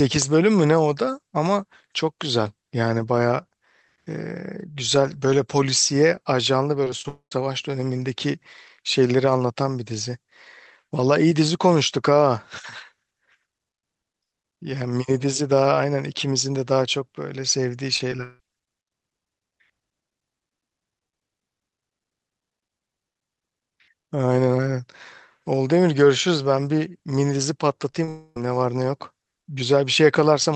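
Repeated packet loss (robotic sound) hits at 6.84–7.05 s, 17.96–18.40 s and 27.90–28.09 s. Lost packets are patched by stretching the preceding sound, so the audio turns choppy with pieces missing, with half of the middle burst concealed.

Directly after the first and last bursts, at 7.08–7.32 s and 28.09–28.37 s, the sound dissolves into a fading buzz and then 100 ms and 30 ms of silence. A long network dropout is the likely cause, and about a quarter second of audio is lost each time.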